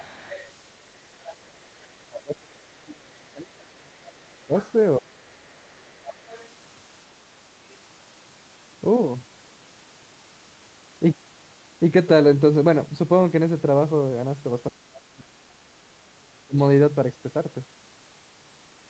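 Other side's voice leaking through appears from 0.0 to 0.52 s and again from 1.21 to 1.88 s. A faint second voice sits roughly 20 dB under the speech, likely loudspeaker echo that the echo canceller failed to remove.

Speech suppressed in double talk follows from 1.91 to 5.75 s. The talker's voice is pulled down, falling by as much as about 30 dB over roughly three seconds in total. The likely cause is the canceller ducking both voices while both sides spoke at once.

The leakage returns from 5.28 to 6.47 s, overlapping the end of that suppression, again quiet beneath the speech.

Speech suppressed in double talk recurs from 14.7 to 16.58 s, with the voice pulled down for around one and a half seconds.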